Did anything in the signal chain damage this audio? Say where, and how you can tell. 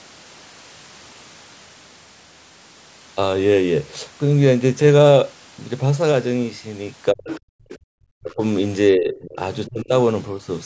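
Yes. The call processing's echo canceller most likely mistook double talk for echo, so the speech was suppressed in double talk. The talker's speech dips sharply, by roughly 25 to 40 dB at its deepest, at 7.12 to 7.3, 7.77 to 7.98, 8.2 to 8.41, 8.95 to 9.39 and 9.67 to 9.92 s.

The same canceller likely left residual loudspeaker pickup in the microphone signal, so the other side's voice is leaking through. A faint second voice is audible from 7.28 to 7.38 s, about 15 dB below the speech, and again from 7.69 to 7.76 s, about 20 dB down.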